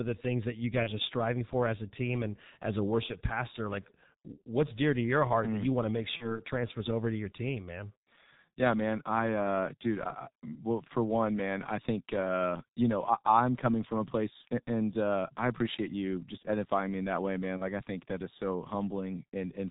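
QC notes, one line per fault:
Throughout: G.723.1 codec at 6.3 kbit/s, heavily damaged speech. Nothing above 4 kHz leaves it muffled and hoarse. A spectrogram shows a hard ceiling and smeared consonant onsets.
0.83–0.91, 6.17–6.42, 14.42–14.46, 17.57–17.63 s: VoIP packet loss concealed by the speech codec. The gaps fall after "the things that you", "you want to make" and "am coming from a". Each points to one lost 30 ms frame. The decoder repeats the last pitch and filter, so a short, fading stretch of buzzy tone or coloured noise appears with a dipping envelope.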